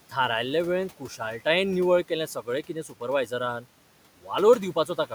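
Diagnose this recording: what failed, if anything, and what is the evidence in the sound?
Just after "निवळ केलें सगळें", between 2.67 and 3.02 s, the speech turns faint and swallowed, dipping by up to about 12 dB over about a tenth of a second in total. This is speech cut by the noise suppressor in call processing, which mistook quiet speech for the room noise sitting about 21 dB below it.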